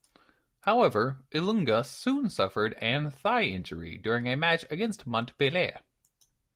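No technical faults can be heard anywhere in the speech.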